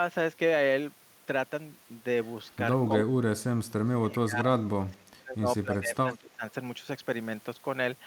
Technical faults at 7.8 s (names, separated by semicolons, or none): none